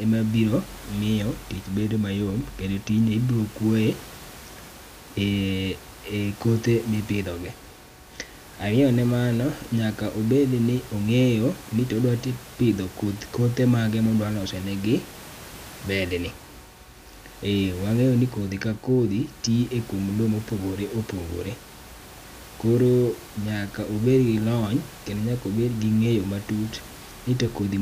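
No technical fault can be heard in the speech recording; the only background is the room's own noise, sitting about 20 dB below the voice, which belongs to the recording space rather than to the signal chain.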